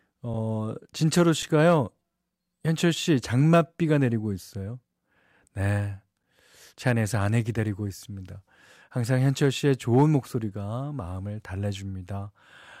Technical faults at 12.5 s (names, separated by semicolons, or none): none